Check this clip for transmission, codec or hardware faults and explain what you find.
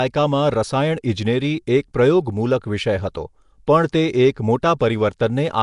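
One codec fault runs through the whole speech clip, most likely Nellymoser compression. Across all of it the voice carries a rough, hissy halo and a smeared, underwater quality, with nothing above 10.6 kHz. Coding blocks of 256 samples at a fixed two bits per sample starves weak bands, which are then filled with noise. That invented noise, not lost detail, separates it from MP3 swirl or plain low-pass dullness.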